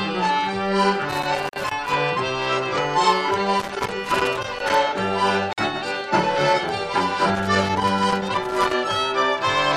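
Three irregular bursts of loose connector crackle, at 1.09 to 1.94 s, 3.60 to 4.75 s and 7.35 to 8.74 s, come from a worn contact chopping the signal; their ragged, scratchy texture separates them from clean dropouts. Two brief silences, 36 ms at 1.49 s and 49 ms at 5.53 s, spaced 4.0 s apart, are gaps at a join of encoded pieces, where leftover encoder delay and padding interrupt the audio.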